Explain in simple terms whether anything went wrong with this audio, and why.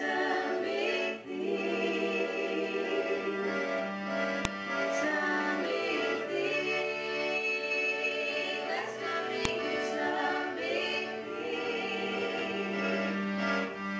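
Two sharp clicks land at 4.45 s and 9.45 s, five seconds apart. That's a file header played as audio: the sound was stitched from separate pieces, and each piece's header bytes got played as sound instead of being stripped off.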